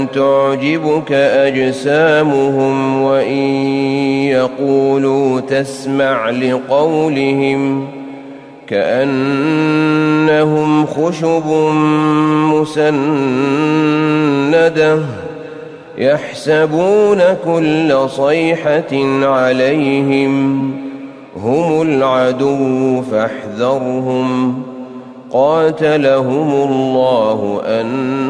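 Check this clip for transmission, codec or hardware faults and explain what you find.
No transmission, codec or hardware faults are audible in the clip. Nothing in the sound points to a problem anywhere along the chain between source and listener.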